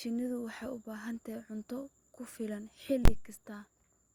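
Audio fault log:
3.05–3.08 s, invalid numbers at full scale: just after "tahay cunto ku filan", a calculation produced infinite or invalid values that were clamped to the maximum level, pinning the output flat at one extreme value far beyond the speech's peaks for about 23 ms, which fits a 1024-sample block. Because the block is so short, it is heard as one loud bang.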